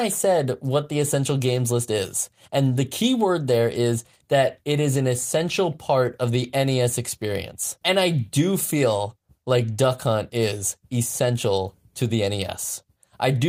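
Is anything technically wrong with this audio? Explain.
No, nothing technically wrong turns up anywhere in this speech recording, so there's nothing here to flag or fix.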